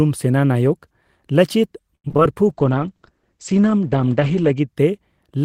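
Right around 1.95 s, through to about 2.20 s, there's a burst of repeated packet loss, and you get that robotic, choppy texture. Five holes land in quick succession, the longest about 86 ms. Each one gets patched by stretching the previous bit of speech, roughly 137 ms of filler in total, with another 50 ms simply gone. More than half of that quarter-second is concealment, so it comes out choppy and broken.

Shortly after, from about 2.47 s to 4.74 s, there's a call bitrate drop. The encoder got squeezed, and the sound fits a fall from around 32 kbps to about 12 kbps, sitting at the bottom for roughly 2 seconds. The audio band shrinks too, with everything above about 8 kHz cut where it previously reached 20 kHz. The speech turns dull, muffled and a bit watery until the rate climbs back near the end.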